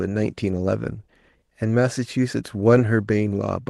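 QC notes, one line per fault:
No faults to note for this speech clip.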